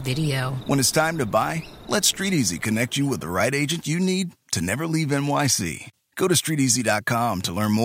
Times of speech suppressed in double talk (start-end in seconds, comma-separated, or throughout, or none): none